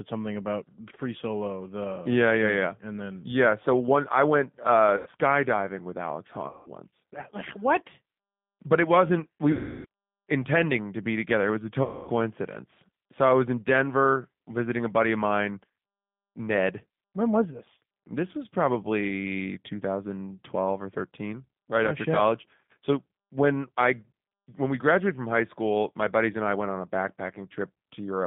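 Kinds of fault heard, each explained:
G.729 codec: Throughout, the speech sounds narrow, slightly rough and synthetic, confined to roughly 150 Hz to 3.6 kHz. This is the 8 kbit/s G.729 codec, which rebuilds each 10 ms frame from a vocal tract filter, a pitch predictor and sparse pulses.
VoIP packet loss concealed by the speech codec: Four dropouts are stretched into a fading buzzy tone or coloured noise, at 4.97 s after "one I went uh", at 6.48 s, at 9.52 s before "intending to be together", and at 11.83 s after "was a". Each time, the decoder extrapolated its last pitch and filter across 90 to 330 ms of missing audio.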